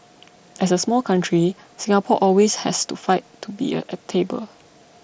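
At 1.16 s there is a single instance of concealed Bluetooth headset packet loss, a gap of about 7.5 ms, which fits one lost headset frame. The receiver filled it by repeating the best-matching stretch of the preceding waveform, so it is nearly inaudible. On a waveform the cycles just before 1.16 s recur almost exactly. A spectrogram shows a sliver of repeated harmonics within the 8 kHz band that the mSBC codec carries.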